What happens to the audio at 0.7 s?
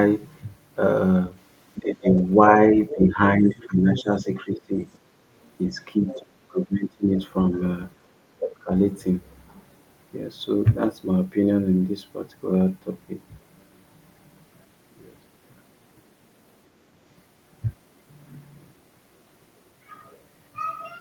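Nothing goes wrong at 0.7 s; the speech plays through that moment intact, with no dropout, click or distortion.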